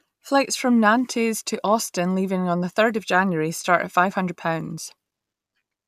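No technical faults can be heard anywhere in the speech.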